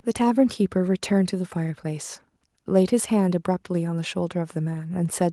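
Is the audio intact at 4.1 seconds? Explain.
Yes, the audio is intact at 4.1 seconds, with no dropout, click, distortion or other fault at that moment.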